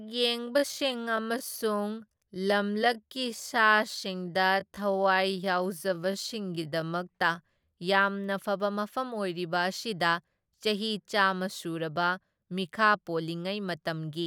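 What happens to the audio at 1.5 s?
At 1.5 s the speech is in a time-stretched section that runs from 0.0 to 7.0 s, playing at roughly 0.7 times its normal pace. It sounds drawn out, and the pace picks up abruptly at 7.0 s. The likely cause is software lengthening the audio by repeating short pieces to preserve pitch. That is what separates it from a plain slowdown, which would also drop the pitch.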